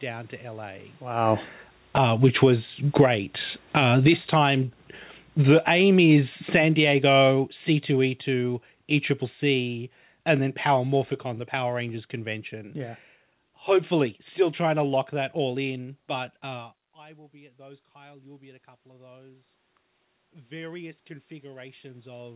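Speech, carried over a narrowband call path with nothing above 4 kHz, which fits G.711 mu-law coding. The main fault is automatic gain falling. Around 1 s the talker seems to come closer, and the gain control reacts as if the input were too loud. From 1.82 s to 11.92 s it pulls the level down by about 20 dB. The voice and the room noise sink together, slowly, over ten seconds. A second, smaller drop of about 3 dB follows from 13.69 s to 15.75 s. Near 16.5 s the opposite fault begins: automatic gain rising. The talker seems to move away, and the input falls by about 24 dB. The gain control then lifts its gain to compensate. From 16.54 s to the end, the voice swells back up gradually. The background noise rises with it, at the same rate. Both faults come from the gain control chasing level changes at the microphone, not from the codec.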